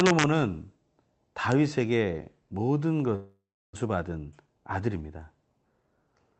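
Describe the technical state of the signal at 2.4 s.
At 2.4 s the speech is intact, carrying only the ordinary coding character of the call path it passed through, with its band reaching up to 8 kHz.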